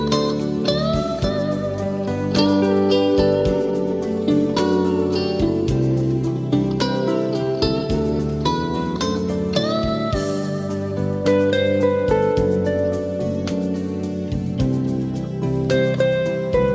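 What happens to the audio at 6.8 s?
At 6.8 s the audio is intact, with nothing beyond the ordinary call microphone processing, which band-limits the sound to below 8 kHz and trims the lowest bass.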